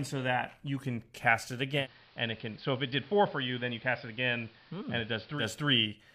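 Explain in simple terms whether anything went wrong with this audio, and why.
At 1.76 s, just after "you can cast it", the receiver does digital radio blending to analogue: it fades to the AM broadcast, adding faint hiss and dropping slightly in volume, then returns to digital at 5.46 s.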